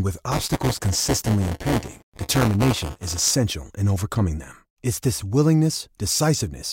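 From 0.31 to 3.31 s, just before "in overcoming them", the speech carries a steady robotic rattle at 200 Hz. That is buffer tearing: writer and reader of the ring buffer have slipped, so every 5 ms period roughly 15% of the audio is replaced with material about 10 ms old, with hard joins on both sides. Unlike random dropouts or crackle, the buzz is rigidly periodic and appears only while speech is present.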